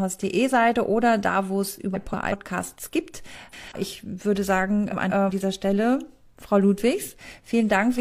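Speech, with three short stretches where the frames are out of order: 1.94–2.33 s, 3.33–3.72 s and 4.91–5.30 s. In each, two adjacent blocks of about 0.19 s play in swapped sequence, producing a brief garbled flutter. The block length fits runs of four codec frames being exchanged in transmission and decoded as received. No audio is lost, only reordered.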